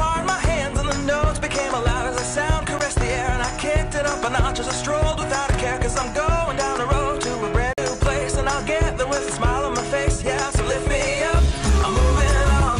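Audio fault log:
2.79 s: block of digital silence. The signal drops straight to zero for about 12 ms and returns with no fade, so the abrupt edges merge into a single sharp tick. The length fits a 512-sample buffer that was not filled in time.
7.73–7.78 s: block of digital silence. A longer run of zeros, about 46 ms, fitting a 2048-sample buffer, is heard as a brief hole.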